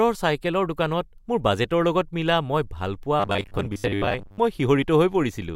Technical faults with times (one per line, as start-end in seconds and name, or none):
3.20-4.39 robotic sound from repeated short buffers